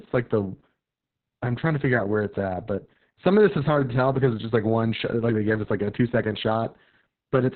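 Speech, damaged by Opus voice compression for its whole length. The codec runs in its SILK linear-prediction mode and squeezes the band to narrowband, so everything above about 4 kHz is gone. The excitation is coded very coarsely. The speech sounds muffled, hoarse and slightly robotic. The damage is heavy and constant. It fits a bitrate near 6 kbps and long 60 ms frames.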